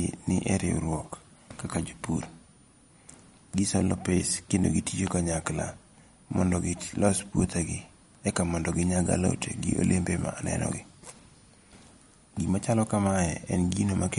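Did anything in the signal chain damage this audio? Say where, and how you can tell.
Yes. A switching supply whistle, a steady high tone sitting around 9.4 to 9.5 kHz, runs through the whole clip, roughly 35 dB below the speech. It enters in the analogue wiring or power stage: a switching regulator oscillating in an audible burst mode couples into the signal path, and its pitch wanders slightly within that narrow band as the load shifts.

The second fault is in the codec stage and is most likely MP3 compression. Nothing is present above 11.2 kHz, and the speech has a plainly audible watery, swirly texture. That fits a low bitrate near 48 kbps forcing the encoder to cut the treble and drop weak spectral lines frame by frame.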